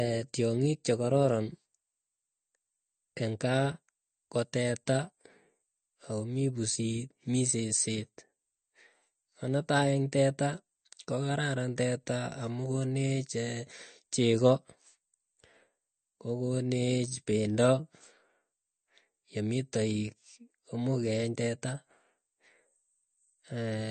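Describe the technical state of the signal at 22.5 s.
At 22.5 s the speech carries the same damage heard across the whole clip, likely MP3 compression at a low bitrate, around 40 kbps. Nothing sounds above 8.6 kHz, leaving a flat ceiling on a spectrogram, and the weak frequency lines flicker in and out, giving a watery, swirly quality.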